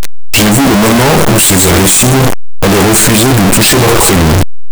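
Loud, harsh distortion runs throughout, with soft sounds as loud as strong ones. The likely cause is signed and unsigned mixed up in the 8-bit samples.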